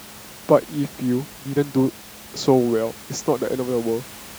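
Nothing stood out on listening to this speech recording, with the room's own background noise sitting about 20 dB below the speech as part of the recording itself.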